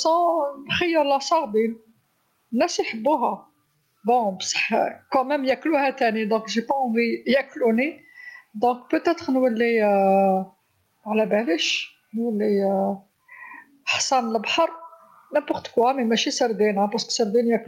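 Throughout the speech there is gain pumping, with the level swinging by about 10 dB. The likely cause is input gain set far too high, with a fast limiter clamping down on each loud sound. Peaks and quieter passages sit close together, so the speech sounds squashed. On a waveform the envelope looks flattened.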